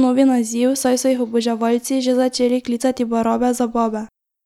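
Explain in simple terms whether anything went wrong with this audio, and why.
Listening to this speech recording, nothing stood out as having gone wrong.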